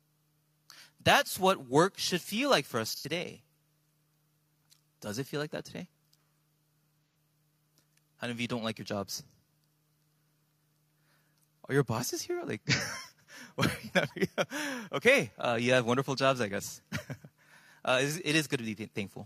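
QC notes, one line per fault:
2.89–3.06 s: AAC frame loss with concealment. About 85 ms of data missing, which points to two lost frames. The decoder rebuilds the gap from the last good spectrum, so the sound turns briefly smeared and noisy.
7.10–7.15 s: AAC frame loss with concealment. Again about 85 ms lost, fitting two frames, heard as a short phasey blur.
12.73–12.80 s: AAC frame loss with concealment. About 43 ms lost, consistent with one frame, giving a brief noisy patch.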